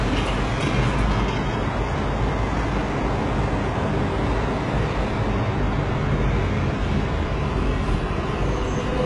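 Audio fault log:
Throughout, HE-AAC compression: the treble has a bright but gritty, metallic sheen that does not quite belong to the sound beneath it, and everything above about 11.4 kHz is missing. Heavy damage of this kind points to a very low bitrate, around 12 kbps, which likely comes from HE-AAC coding. That coding keeps only the lower spectrum and rebuilds the top by copying lower bands upward under a coarse envelope, so the upper harmonics fail to line up with the ones below.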